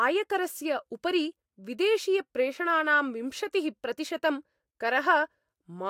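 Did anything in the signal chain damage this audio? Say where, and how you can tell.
No, nothing in the chain audibly damaged this speech recording; the signal stays continuous and stable at every stage, with no point where the capture, conversion, transmission or playback path leaves a mark.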